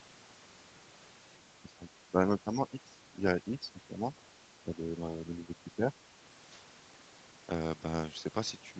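The speech dips at 1.61–3.26 s, 3.44–4.09 s and 4.61–5.97 s, deepest first. This is likely speech suppressed in double talk.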